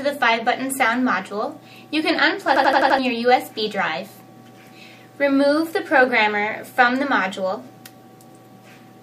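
From 2.56 to 2.99 s the system hangs while the sound hardware keeps replaying its ring buffer, producing a system hang loop. One 85 ms slice, consistent with a 4096-sample buffer, repeats five times at 11.7 Hz. The result is a machine-gun stutter that replaces around 400 ms of audio.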